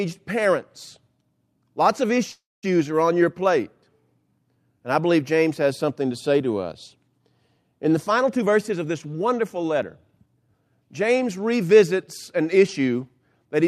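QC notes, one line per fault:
2.31–2.65 s, call audio freeze: the sound halts and its last moment carries on as a brief fading buzz, then about 220 ms of silence, before the audio picks up again at "are on your plate". Nothing is lost; 315 ms has been inserted into the flow. This points to packets held up in transit, likely leaving the jitter buffer empty while the receiver filled the wait and then resumed from where it stopped.
8.10–10.49 s, jitter buffer speed-up: the speech runs at about 114% of its normal rate while the pitch stays the same, so it sounds rushed. The receiver was holding more buffered audio than its target, and to bring the delay back down it cut many tiny slices, each one or a few pitch periods long, one after another. Roughly 300 ms in total is removed across this stretch.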